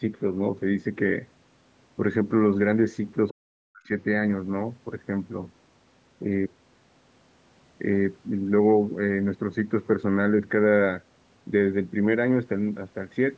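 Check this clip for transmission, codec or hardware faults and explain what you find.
Two related faults sit close together just after the three-second mark, both pointing to an echo canceller struggling during a call.

Other side's voice leaking through, 3.29 to 3.34 s: a brief, faint scrap of a second voice surfaces, roughly 25 dB below the main talker. This is likely residual echo: the far end's audio, played from the talker's loudspeaker and picked up again by the microphone, was not fully subtracted by the echo canceller, so a fragment slips into the outgoing signal.

Speech suppressed in double talk, 3.32 to 3.92 s: right as that leak appears, the talker's own speech is pulled down hard, dropping by a very large amount and breaking up over about half a second in total. With both sides active at once, the canceller could not tell the talker's voice from the loudspeaker echo and attenuated everything, so the speech dips and cuts out in pieces. 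The call's microphone processing carries nothing above 8 kHz throughout, which is expected for this kind of path.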